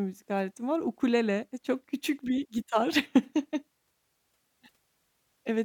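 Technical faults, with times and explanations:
No technical faults can be heard in this speech clip.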